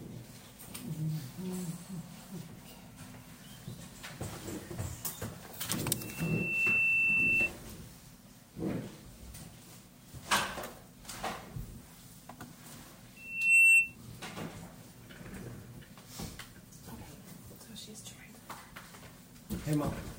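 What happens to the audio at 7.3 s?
At 7.3 s you're near the tail of a loudspeaker feedback squeal that runs from about 5.96 s to 7.51 s. A microphone is hearing the speaker it feeds, and at 2.7 kHz the loop gain tips past one, so that frequency keeps feeding itself. It swells over most of a second into a piercing tone that sits roughly 15 dB above the rest of the sound before it cuts away.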